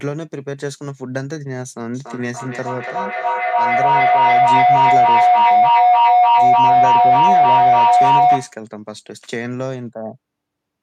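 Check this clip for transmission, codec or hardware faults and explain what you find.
One fault is present: feedback howl from 1.94 to 8.65 s. A tone near 700 Hz swells to about 13 dB above the speech, with the loop repeating roughly every 0.3 s. Two devices on the call share a room, so each mic-to-speaker loop adds gain until the sound rings.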